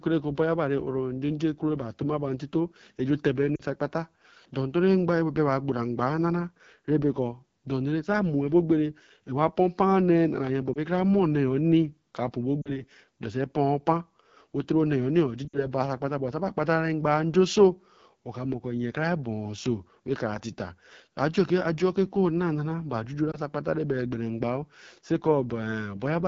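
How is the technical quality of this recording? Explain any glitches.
The quality is poor. It is coded speech with plainly audible damage and five brief dropouts.

AMR wideband (HD Voice) codec runs throughout. The roughness and rasp point to one of the lowest modes, around 8.85 kbit/s. A pulse-driven vocal tract model struggles at that rate, and the top band is only shaped noise.

Lost AMR speech frames occur at 3.55 to 3.62 s, 10.73 to 10.78 s, 12.62 to 12.82 s, 15.48 to 15.66 s and 23.31 to 23.38 s. Corrupted frames were replaced by the decoder's guess from the last good frame, with falling gain. The missing spans are about 20 to 60 ms. The single-frame losses are heard as a quick dip or warble, the longer runs drop to near silence, and the speech returns briefly rough.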